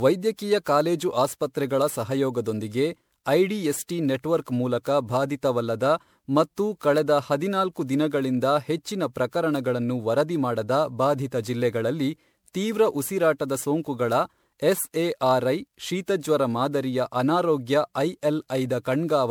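From start to end the speech carries generation loss: a swirly, hollow, smeared texture, with consonant attacks blurred. It likely comes from about ten rounds of lossy encoding and decoding, each requantising on a shifted frame grid so the damage compounds, and the character fits MP3 at around 128 kbit/s. A spectrogram shows flickering holes scattered through the upper bands and nothing above 20.9 kHz, while the waveform's transients look softened.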